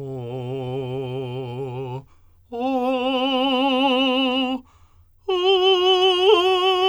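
No technical faults can be heard anywhere in this music clip; the signal stays intact and continuous across its whole duration.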